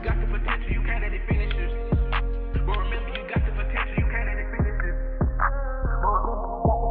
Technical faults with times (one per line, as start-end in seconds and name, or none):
none